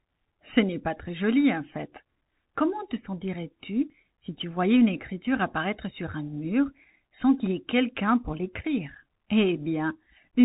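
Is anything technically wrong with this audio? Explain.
Yes. Throughout, the speech has gone through a Bluetooth CVSD headset codec. It sends one bit per sample saying up or down, with an adapting step, which fits a 64 kbps link. Nothing above about 3.8 kHz survives, s sounds come out scratchy, and a grainy hiss sits underneath.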